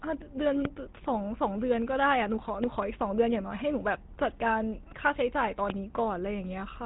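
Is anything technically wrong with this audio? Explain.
Yes, there are two problems: codec damage throughout, and four loud pops.

The whole speech clip has the plainly audible sound of the GSM full-rate codec. This coder rebuilds the voice from a vocal-tract model driven by a sparse, regular pulse train, which fits a rate around 13 kbps. The result is a buzzy, gravelly roughness, and nothing above about 3.8 kHz survives. Plain low-pass filtering would sound muffled but smooth. Here the grain is built into the voice itself.

Loud pops occur at 0.65–0.67 s, at 2.64–2.84 s (two pops in quick succession) and at 5.70–5.72 s. Each peaks roughly 15 dB above the speech. They are likely caused by a sudden voltage step or spike, such as a connector, switch, static discharge or driver glitch, which the following circuitry shapes into a sharp thump. A dropout or edit click would interrupt the sound. 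Here the speech runs on unbroken underneath each pop.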